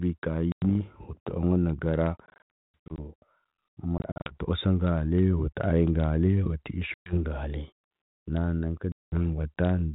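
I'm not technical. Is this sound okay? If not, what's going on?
No. This speech has packet loss on an ADPCM call: sharp-edged silences at 0.52, 2.26 to 2.98, 3.98 to 4.31, 6.94 and 8.92 seconds. Unlike a plain dropout, the voice returns slightly distorted before settling.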